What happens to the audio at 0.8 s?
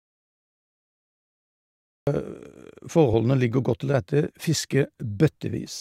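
At 0.8 s the clip is inside an audio dropout to silence that is already under way when the clip begins and lasts until 2.07 s. The input was likely lost while zeros kept being written, so the gap is dead silence with no room tone, unlike a natural pause, and the speech returns abruptly.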